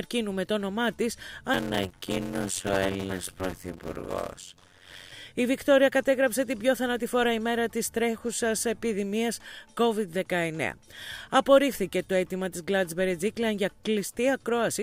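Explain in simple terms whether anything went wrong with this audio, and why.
A block size mismatch (padded) affects the audio from 1.53 to 5.12 s. One stage passes along smaller chunks than the next expects, and it fills each shortfall with silence. Those tiny gaps create a 92 Hz buzz and slow the sound to about half speed, while the timbre stays the same.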